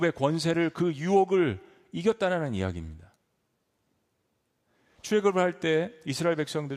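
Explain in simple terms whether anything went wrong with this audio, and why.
Nothing went wrong here: the speech comes across steadily all the way, with no dropouts, glitches or other technical slips to point to.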